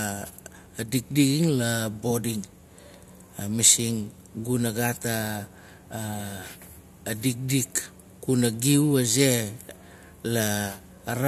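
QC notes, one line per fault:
No faults were heard anywhere in the recording, and nothing stood out on listening.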